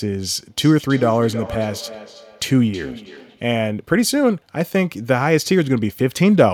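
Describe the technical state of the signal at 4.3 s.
At 4.3 s the speech signal is intact, with no audible fault at that moment.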